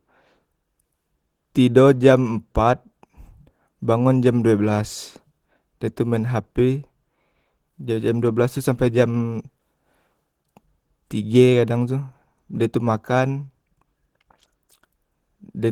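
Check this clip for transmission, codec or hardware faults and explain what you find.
One codec fault runs through the whole clip: Opus voice compression. The speech sounds somewhat hoarse and slightly robotic, with a grainy, approximate quality to the voiced sounds that is plainly audible from start to finish. The band is not cut off, extending to about 20.3 kHz. The signature fits Opus in hybrid mode at about 16 kbps with 20 ms frames. The linear-prediction layer below 8 kHz codes the excitation coarsely, and a thin transform layer carries the top.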